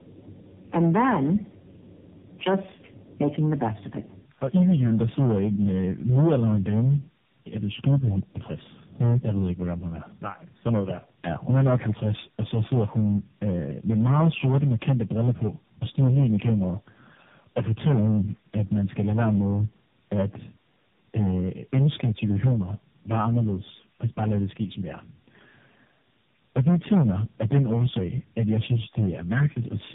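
Speech runs the full clip with two faults present throughout. The first is hard clipping. The level was pushed about 13 dB past what the signal path could carry, so the peaks are sliced flat, and around a tenth of the waveform sits against the ceiling. Those squared-off tops generate harmonics well up the band. Every louder syllable therefore comes through with a harsh, buzzy fuzz rather than occasional crackle. The second is tandem speech coding. The audio carries the combined damage of several narrowband speech codecs in series, each re-encoding the previous one's output. The character points to three codec stages in a row, such as GSM full rate followed by two AMR-NB passes at low bitrates, with G.711 links between them. Nothing is left above 3.7 kHz, and the voice sounds muffled, rough and warbly beyond what any single codec would produce.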